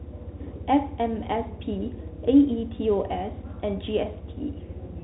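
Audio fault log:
throughout Bluetooth CVSD headset codec: the speech went through a one-bit delta modulator whose adaptive step can't keep pace with fast, loud changes, which fits a 64 kbps CVSD link. Nothing above 3.8 kHz survives, s sounds turn scratchy, and granular hiss runs underneath.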